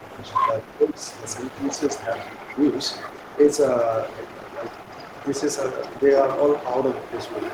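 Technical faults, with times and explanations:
0.0–0.81 s, 0.99–3.62 s and 3.84–7.53 s: echo leak. A faint copy of the speech trails about 250–260 ms behind, about 20 dB down and nearer 15 dB in the last stretch. This is likely a loudspeaker echo the far end's canceller failed to remove.
0.02–0.35 s, 0.63–1.02 s and 1.89–2.12 s: speech suppressed in double talk. The speech dips by roughly 10, 15 and 5 dB, likely because the canceller ducked everything while both sides were talking.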